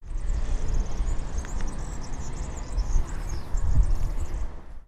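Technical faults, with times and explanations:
3.75–3.77 s, lost LE Audio frames: About 22.5 ms of sound drops out of the Bluetooth LE Audio stream, which fits three lost 7.5 ms frames. The LC3 decoder fills the gap by repeating the last good spectrum with its phases scrambled by random signs. Tonal detail is lost. So this brief moment turns into a short, noisy smear before normal playback resumes.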